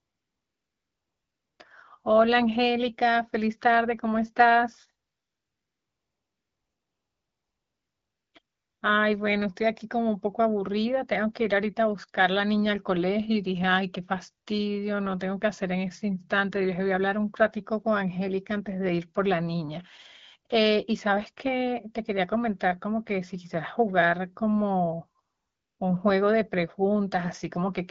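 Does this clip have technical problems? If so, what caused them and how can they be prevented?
Yes. AMR comfort noise replaces the real background at 0.0–1.59 s, 5.07–8.33 s, 8.41–8.81 s and 25.23–25.79 s. The phone stopped sending speech frames there, and the receiver filled the gaps with smooth synthetic noise. Disabling discontinuous transmission on the call, or lowering the voice-activity threshold, would prevent it.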